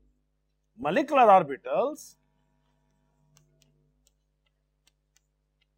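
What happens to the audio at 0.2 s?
At 0.2 s, as throughout the clip, there is imaging from linear upsampling. The rate was raised by straight-line interpolation, which fits 22 kHz to 44.1 kHz. This dulls the top and leaves a mirrored spectrum between 11.03 kHz and 22.05 kHz, roughly 40 dB down, heard as faint metallic shimmer.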